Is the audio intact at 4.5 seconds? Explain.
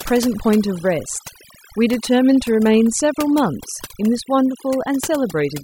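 No. Overdone noise removal runs through the whole clip, including 4.5 seconds: a noise reducer set too strong shuts off frequency bands sitting near its noise estimate, taking quiet parts of the speech along, so the background drops and breaks up into twinkling specks.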